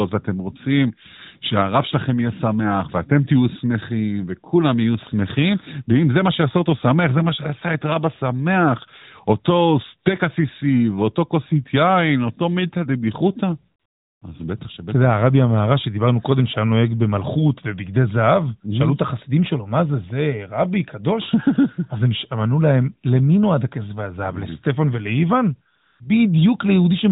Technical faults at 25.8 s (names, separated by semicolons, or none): AMR comfort noise